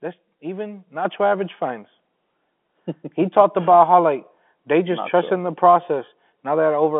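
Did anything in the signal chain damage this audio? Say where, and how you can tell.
Yes. At 1.05 s, just before "average finds", the microphone volume steps up by about 7 dB in a single jump, with speech and background noise rising together. That points to call-processing gain control raising the device's input level, while the G.711 telephone band stays intact.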